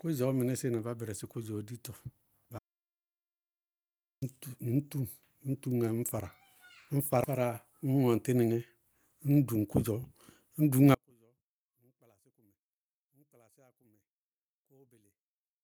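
Audio dropout to silence from 2.59 to 4.22 s breaks up this speech recording: the talking stops mid-flow and about 1.6 s passes in silence, with no room tone or background hiss, before the speech resumes just as abruptly. That dead-flat gap points to the input signal being lost while recording continued and silence was written in its place, most likely a momentary disconnect, a dropped link or an accidental mute. Whatever was said during that stretch is gone. One channel inverted affects the section from 10.95 s to the end, where the speech collapses by about 38 dB and turns faint when heard in mono. One stereo channel has its polarity flipped, likely through a wiring or processing error. The centred speech is nearly identical in both channels, so summing them cancels almost all of it and leaves only the small difference between left and right.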